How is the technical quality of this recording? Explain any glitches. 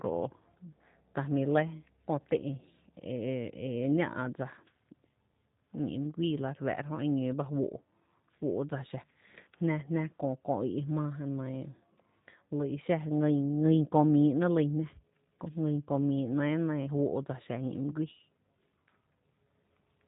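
Technical quality is limited by low-bitrate voice coding across the whole speech clip. The G.729 codec damage is plainly audible from start to finish: the speech is rebuilt from a vocal tract filter, pitch prediction and a few pulses per 10 ms frame, which fits roughly 8 kbit/s. It sounds rough and synthetic, and a spectrogram shows nothing above 4 kHz.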